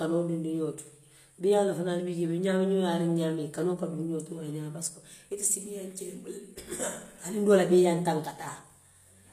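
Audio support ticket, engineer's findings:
Speech, whole clip: gritty, lispy s sounds and a metallic top, plainly audible. Likely HE-AAC compression at a low bitrate, near 24 kbps. Treble is rebuilt by band replication from lower bands, so harmonics misalign; nothing above 14.9 kHz.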